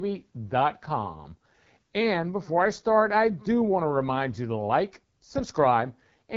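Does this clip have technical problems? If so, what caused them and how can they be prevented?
Yes. The speech passed through the AMR wideband (HD Voice) codec at a very low rate, which points to roughly 8.85 kbit/s, one of its two lowest modes. From start to end, the codec's pulse-driven vocal tract model has too few bits to describe the signal, so the damage is plainly audible: a rough, raspy texture on every phrase, with nothing above about 7.5 kHz and a noise-filled top band. To prevent it, run the call or recording at 12.65 kbit/s or higher, or capture locally before encoding.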